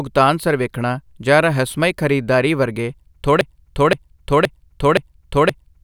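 A broken-record loop takes over this speech clip at 3.41 s, just after "ਜਾਂ ਰਹੱਸਮਈ ਖਰੀਦਦਾਰੀ ਵਰਗੇ", and runs to the end. A 0.52 s fragment repeats exactly five times back to back, likely because the player or stream stalled and kept resending its last buffer, so the following audio is lost.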